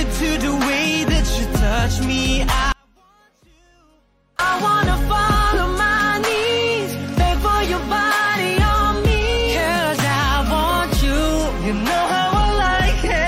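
From 2.72 s to 4.39 s the sound collapses abruptly into an audio dropout to a faint residue. For about 1.67 s only a weak leak remains, roughly 35 dB down. The likely cause is a signal path that stayed live while the source was lost. On a waveform it appears as a sudden near-flat stretch, and on a spectrogram as a dark band with hard edges.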